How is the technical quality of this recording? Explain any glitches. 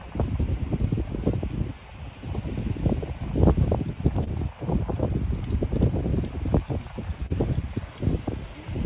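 Two short dropouts mark the recording, both patched over by the receiver. The band stops at 4 kHz, which fits a narrowband G.711 call at 64 kbps.

At 4.24 to 4.28 s and 7.26 to 7.32 s there is short concealed packet loss. About 20 ms and then 40 ms of audio arrived too late. The decoder filled each gap by extending the preceding sound, then blended back. Each patch is heard as a brief smear or wobble, and a short sound there may disappear.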